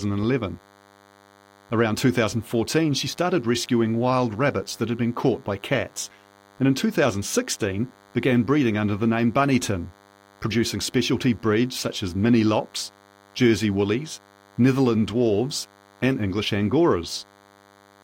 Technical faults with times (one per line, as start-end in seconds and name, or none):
0.00-18.04 DECT cordless phone buzz